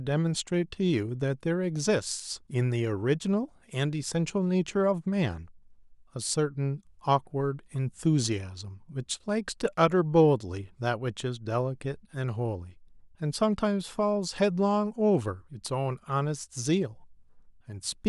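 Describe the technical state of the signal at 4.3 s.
Dropped samples at 4.28 s: a single sharp click, seen as a thin vertical line across the spectrum. It is likely caused by a handful of samples, a fraction of a millisecond, going missing from the stream, so the waveform jumps abruptly to a later value.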